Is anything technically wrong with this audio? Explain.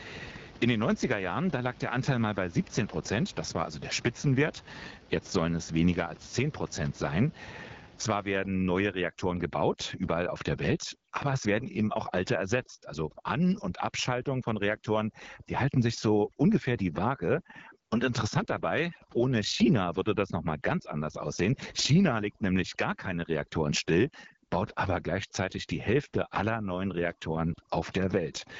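Yes, there are two faults. Throughout, an AMR wideband (HD Voice) codec at a low rate, likely 8.85 kbit/s, leaves the speech rough and raspy. A spectrogram shows nothing above 7.5 kHz and a noise-like top band in place of real detail.

From 8.38 s to the end, overdone noise removal mutes the room noise, which had sat about 22 dB below the speech, along with quieter parts of the voice. A spectrogram shows gaps between words turning nearly black, with scattered twinkling specks.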